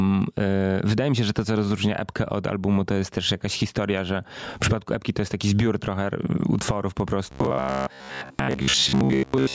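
Gain pumping runs through the whole clip: the level swings by about 15 dB. Likely a microphone gain set far too high, with a fast limiter clamping every loud peak and squashing the dynamics.

Robotic sound from repeated short buffers appears from 7.31 s to the end at 9.55 s, right after "zbiór trochę utworów po". The speech becomes a rigid metallic buzz at 66.8 Hz that only loosely tracks the words. Likely audio was arriving too seldom, so most of it was replaced by loops of the last chunk, a period that fits a buffer of roughly 15 ms.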